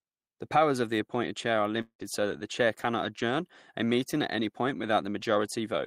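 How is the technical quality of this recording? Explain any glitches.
The recording has one clear glitch in the speech. From 1.81 to 2.02 s, right after "the appointed chair are", there is a break that sounds like a long network dropout. The last sound is stretched into a buzzy continuation lasting about 0.18 s that fades out, then near-silence remains until the speech resumes at "so that the chair". The audio likely stopped arriving, so the receiver padded the gap. Roughly 0.18 s of speech is simply gone. A brief packet loss would be smoothed over in a few tens of milliseconds. Here the fading fill and the missing stretch together point to a longer outage.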